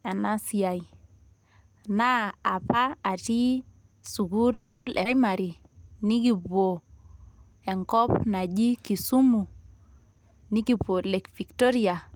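A call audio freeze runs from 4.53 to 4.88 s. The speech stops and the last sound is carried on as a fading buzz for 330 ms, never quite reaching silence, then resumes where it left off. The likely cause is delayed packets starving the jitter buffer.

A skip ahead follows at 5.04 to 5.07 s. Playback jumps forward with a gap of only about 10 ms, dropping roughly a fifth of a second of speech. The audio on either side is joined almost directly, as though that stretch was discarded while later audio waited.

A jitter buffer slow-down lasts from 5.42 to 6.85 s. The receiver repeated single pitch periods many times to rebuild its reserve, adding 190 ms. Speech plays at 87% speed with unchanged pitch, so sounds are drawn out.

A jitter buffer speed-up runs from 10.12 to 12.12 s. With too much audio queued, the receiver trimmed short pitch-period pieces over and over, removing about 200 ms in total. 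Speech plays at 111% speed at the same pitch and sounds hurried.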